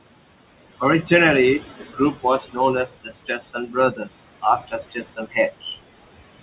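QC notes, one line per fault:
throughout: noise suppressor artifacts; the steady room noise is pulled down by about 20 dB between phrases and rises back under the speech.
1.80–2.25 s, 2.86–4.12 s, 4.91–5.77 s: speech cut by the noise suppressor; quieter parts misjudged as noise drop by up to about 14 dB, sounding swallowed, roughly a third to half of each span.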